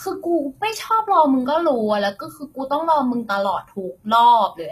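Throughout, s sounds are gritty and metallic, likely from HE-AAC compression around 20 kbps; unlike a plain low-pass, treble stays bright up to 14.9 kHz.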